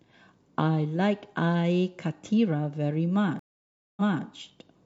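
At 3.39 s a stream reconnect cuts the speech for 574 ms, then resumes 279 ms earlier, repeating audio. That repeat distinguishes it from a plain dropout.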